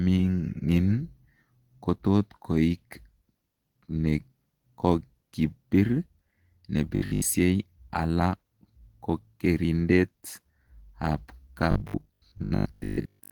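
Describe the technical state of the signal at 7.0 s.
Robotic sound from repeated short buffers runs from 6.96 s to 7.26 s, so 7.0 s falls inside it. Across most of that span, new audio is not arriving, and the playback fills the gap by replaying the same short slice while the real material is skipped. The sound has a rigid, metallic 50 Hz buzz, which fits a 20 ms segment being repeated. The likely cause is a starved buffer loop.

Opus compression is also present at that moment, as it is through the whole clip. The damage is plainly audible: the speech sounds muffled and hoarse, with a grainy, rough texture where the band energy is kept but the detail is filled in coarsely. This character likely comes from Opus running in its hybrid speech mode at a rate around 16 kbps. The bandwidth remains fullband.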